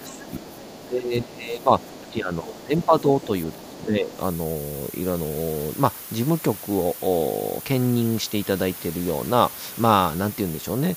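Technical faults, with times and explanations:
Throughout, low bit depth with noise shaping: a steady, thin hiss that climbs sharply toward the top of the band and sits only about 10 dB under the sound. It fits roughly 7 bits, with the rounding error pushed upward into the highs.
0.0 to 4.19 s, speech suppressed in double talk: the talker keeps dipping, down by around 15 dB at worst, for about three seconds in total. The likely cause is the echo canceller failing to tell the talker from the loudspeaker echo and ducking both.
0.05 to 0.33 s, 0.52 to 0.88 s, 1.8 to 2.13 s, 2.80 to 2.86 s, 3.21 to 3.26 s and 3.51 to 3.82 s, other side's voice leaking through: faint scraps of a second voice, about 20 dB under the talker and nearer 25 dB at 2.80 s. The likely cause is echo cancellation leaving some loudspeaker pickup in the microphone.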